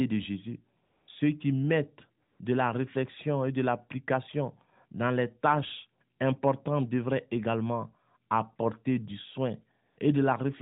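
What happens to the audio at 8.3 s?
Nothing goes wrong at 8.3 s: the speech carries on intact through that moment, with only the steady narrowband, telephone-like character of the AMR narrowband mobile codec at 12.2 kbps that runs under the whole clip.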